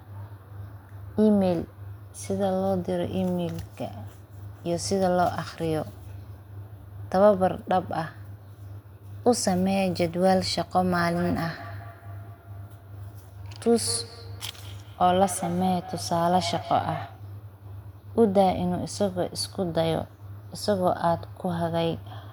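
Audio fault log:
10.98–17.35 s, feedback echo between two devices: speech returns roughly every fifth of a second, thinning and ringing, peaking about 14 dB below the speech, unlike a single-path room echo.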